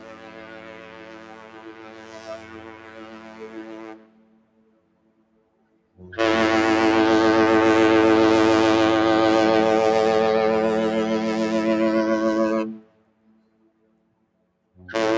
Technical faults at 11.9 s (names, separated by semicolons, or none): noise suppressor applied to music or sounds